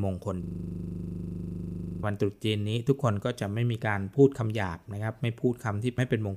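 From 0.43 to 2.03 s the speech breaks into a system hang loop: the system froze while the sound hardware kept replaying its ring buffer, so one 40 ms piece repeats 40 times at 25 Hz, heard as a steady buzz at the loop rate.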